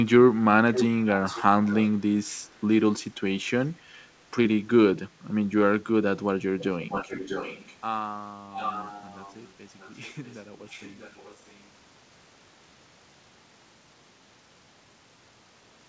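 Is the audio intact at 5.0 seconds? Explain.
Yes, the speech at 5.0 seconds is intact, with no fault at that moment.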